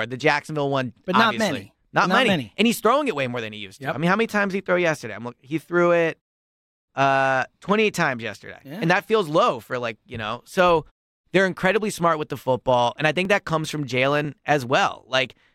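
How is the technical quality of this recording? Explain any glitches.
Late in the speech there is one fault. Periodic USB or driver dropouts occur from 13.25 to 15.25 s, once a second. Something blocks the audio path at a fixed interval and about a millisecond of sound is skipped each time, heard as about three evenly spaced ticks only while sound is present. The fades to silence in the pauses are the muting working as intended.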